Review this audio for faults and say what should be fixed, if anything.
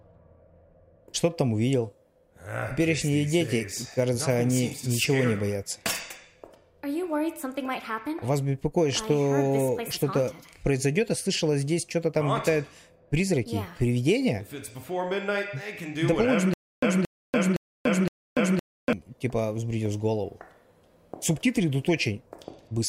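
From 16.54 s to 18.93 s there is a stutter with silent gaps: a 225 ms burst of sound repeats four times, each followed by about 289 ms of digital silence, giving an even 514 ms cycle. The stream or player likely stalled and replayed its last fragment at each retry, so the material meant for that span is lost. On a waveform this appears as identical blocks separated by flat silent stretches; a spectrogram shows repeated matching slices with blank columns between.

To prevent this, give the playback or streaming path enough buffering and network headroom that it never underruns and falls back to replaying stale fragments.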